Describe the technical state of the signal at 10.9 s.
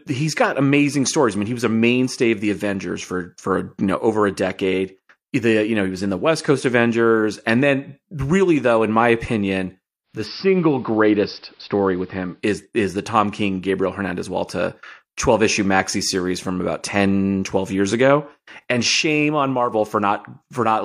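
At 10.9 s the signal is in a digital radio blend to analogue. It runs from 10.04 to 12.45 s, between "though in my opinion" and "is the". A 238 ms cross-fade switches to the AM broadcast. Faint hiss sits about 35 dB down.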